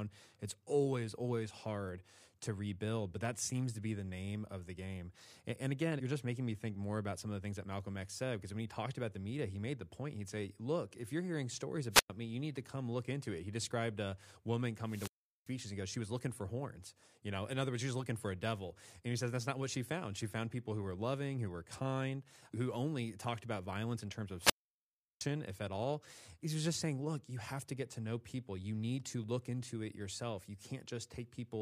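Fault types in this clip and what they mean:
Wireless microphone squelch dropout: the analogue FM microphone's radio signal fades until the receiver mutes the output. Each time, hiss rises briefly and then near silence follows. The three holes last 0.11, 0.39 and 0.71 s, the longest after "about violence in terms".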